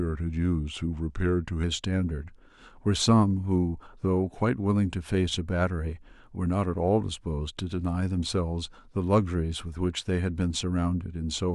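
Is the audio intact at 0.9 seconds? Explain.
No, from 0.0 to 1.63 s the speech sounds slightly low and slowed, about 1.5 semitones flat at 0.92 speed, a wrong sample rate that fits 48 kHz audio played at 44.1 kHz.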